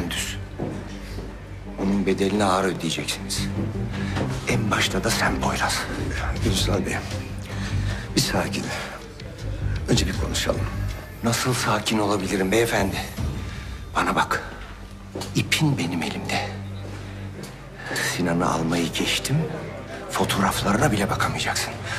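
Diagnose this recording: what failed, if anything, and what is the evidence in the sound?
A stutter or click recurs every 5 s, at 2.75–2.78, 7.78–7.80, 12.80–12.82 and 17.82–17.85 s. This is overlapping chunks at the buffer stage: each 5-second block starts about 23 ms before the previous one ends, so that slice plays twice.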